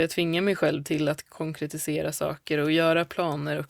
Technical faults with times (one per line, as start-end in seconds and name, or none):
none